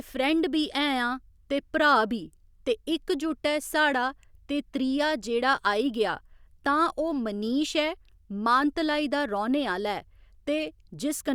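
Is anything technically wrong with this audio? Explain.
No, nothing technically wrong stood out on listening to this speech recording.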